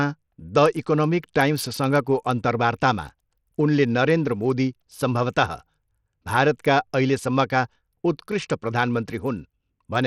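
From start to finish the speech has a gritty, grainy edge, with the treble thinning out and flickering in and out rather than staying steady, and aliasing riding on the sound. The likely cause is Bluetooth SBC compression at a small bit pool, which fits a low rate around 80 kbps: the upper sub-bands get few or no bits, so the top end drops out, while the remaining bands are coarsely quantised into audible noise.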